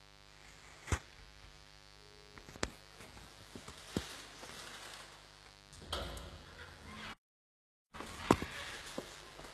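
Switching spikes from the mains supply leak into the signal as mains buzz at 50 Hz, a steady raspy buzz about 15 dB below the sounds, present throughout. The encoding, likely HE-AAC at a very low bitrate around 16 kbps, rebuilds the treble from copied lower bands and leaves nothing above 12.3 kHz, so bright detail sounds gritty and metallic. At 7.13 s the player likely ran out of data, a playback stall that cuts the sound to silence for 0.8 s until 7.95 s. From 7.95 s to the end, time-compressed catch-up trims the backlog by splicing out small pieces, hurrying the sound 1.1 times at normal pitch.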